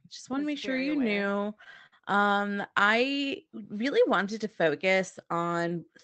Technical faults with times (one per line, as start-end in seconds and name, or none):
0.77-1.94 repeated stalls (stutter)